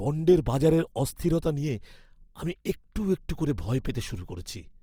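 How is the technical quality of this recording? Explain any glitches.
The quality is limited by plainly audible codec damage across the whole recording. Throughout, Opus compression in CELT mode makes the speech grainy and rough. The likely cause is a low bitrate, fitting about 24 kbps, that fills starved bands with folded or noise content. A spectrogram shows speckled, noisy bands reaching 20.3 kHz, with few holes.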